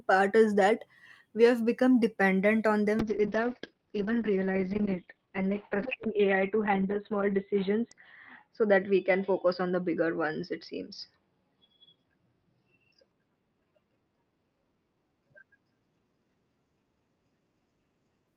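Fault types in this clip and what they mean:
Call bitrate drop: from 3.01 s to the end, the encoder is starved of bits. The sound turns coarse and watery and the top end is cut above 4 kHz instead of reaching 20 kHz, consistent with a fall from about 40 to 7 kbps, bottoming out for 4.4 s.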